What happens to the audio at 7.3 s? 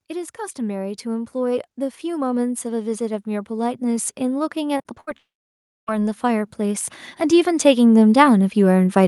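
At 7.3 s the automatic gain rising is still under way; it runs from 0.05 s to the very end of the clip at about 9.07 s. The gain control judged the incoming speech too quiet and keeps turning its own amplification up little by little, so by this point the level is higher than at the start. Voice and background noise climb together, giving a slow, steady swell rather than any sudden jump.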